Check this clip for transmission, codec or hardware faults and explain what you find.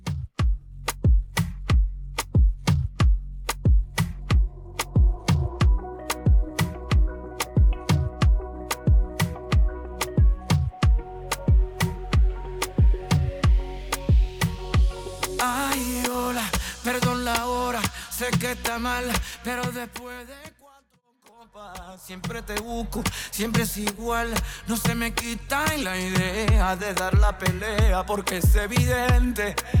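No faults turn up when checking this clip.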